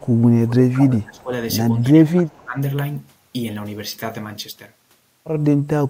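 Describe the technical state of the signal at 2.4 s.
The echo canceller likely mistook both sides talking at once for echo, so speech suppressed in double talk spans 1.73 to 2.57 s, dropping the speech by about 20 dB.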